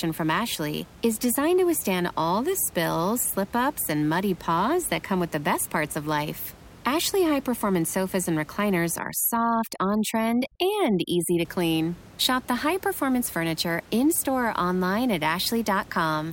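A speech recording with room noise sitting about 23 dB below the voice shows overdone noise removal from 8.99 s to 11.45 s, right after "performance sofas and recliners". An over-aggressive noise reduction stage is gating individual frequency bands that sit close to its noise estimate, so the background drops and breaks up into twinkling specks, and the low-level parts of the voice are stripped away too.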